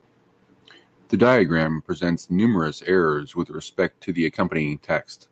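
No technical faults detected.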